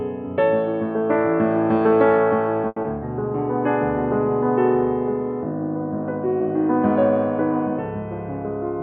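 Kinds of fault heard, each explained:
Short stall from a late packet, 2.67 to 2.78 s: a packet arrived late, the jitter buffer emptied, and the receiver held the last sound for 90 ms before resuming where it left off. No music is lost, but a moment drags, and playback runs 90 ms later.
Short concealed packet loss, 2.82 to 2.86 s: 40 ms of music never reached the decoder in time. The receiver bridged it with 20 ms of continued sound and caught up by about 20 ms, leaving a brief smear or wobble as the real audio resumes.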